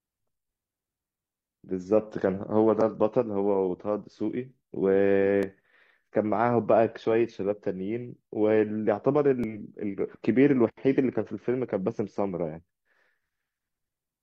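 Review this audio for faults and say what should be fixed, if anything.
Two skips from overlap between stream segments occur, at 5.43 to 5.47 s and 9.44 to 9.47 s, each removing about 35 ms of speech. The timestamps of adjacent segments overlapped, so the player discarded the overlap as duplicate even though that audio was unique. The waveform jumps, heard as a click or tiny skip. The two events are 4 s apart, matching a 4 s segment length. Prevent it by making segment timestamps contiguous at the packager.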